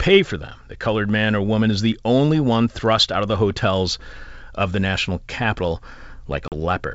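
Near the end, from 6.48 to 6.54 s, there is packet loss on an ADPCM call: about 40 ms of audio, a couple of packets, is replaced by a hard-edged silence. The decoder's adaptive predictor and step size fall out of step with the sender's, so the sound resumes with brief, slight distortion before settling. The wideband G.722 coding, consistent with 64 kbit/s, keeps its full bandwidth around the gap. A waveform shows a flat line with abrupt edges, and a spectrogram shows a clean vertical blank strip across all frequencies.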